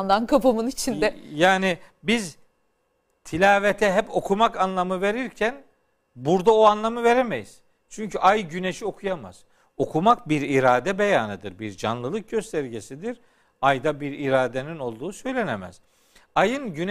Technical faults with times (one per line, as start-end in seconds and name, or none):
none